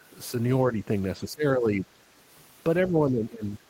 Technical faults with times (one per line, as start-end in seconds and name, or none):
1.24-1.87 speech suppressed in double talk
2.89-3.44 speech suppressed in double talk